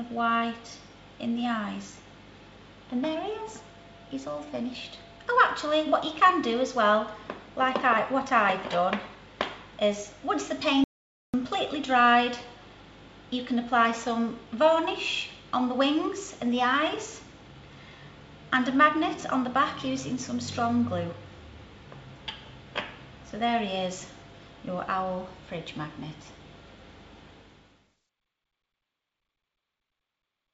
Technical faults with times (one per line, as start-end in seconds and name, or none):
10.84-11.34 audio dropout to silence